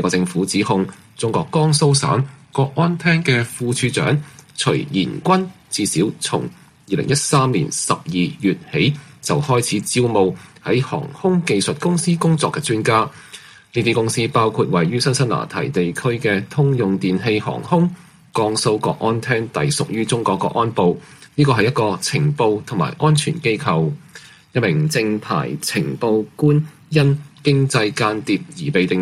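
The audio drops about 6% in speed and roughly a semitone (107 cents) in pitch from 1.85 to 3.49 s, then runs 6% fast and 101 cents sharp from 24.76 to 27.02 s, snapping back each time. This is likely a drift correction step. Unlike wow, the rate holds steady and then returns abruptly, rather than wobbling.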